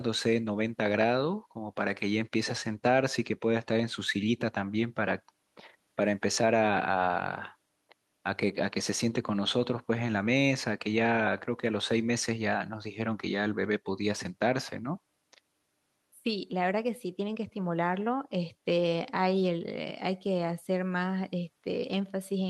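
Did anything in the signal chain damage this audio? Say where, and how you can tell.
No, nothing along the chain left a mark on this speech that I can hear, so there's no damaged stage to point to.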